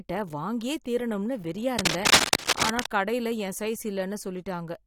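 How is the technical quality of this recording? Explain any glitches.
The recording has one noticeable glitch. Cable scratch noise runs from 1.79 to 2.90 s, right after "வாங்கியே தீரணும்னு வெறியா". It is likely caused by a worn cable or connector being moved, its contact resistance fluctuating rapidly. This produces dense, uneven scratching bursts that sit about 5 dB louder than the speech for just over a second.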